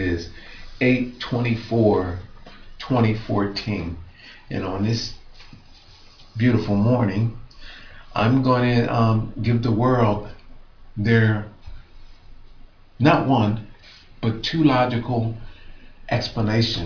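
No technical faults are audible.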